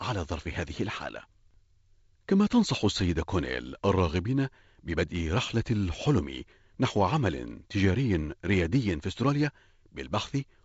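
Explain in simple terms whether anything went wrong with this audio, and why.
Nothing went wrong that stood out on listening; the speech comes through the G.722 wideband telephone coding as it normally would.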